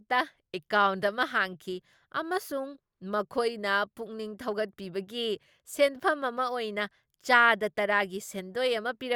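No technical faults are audible.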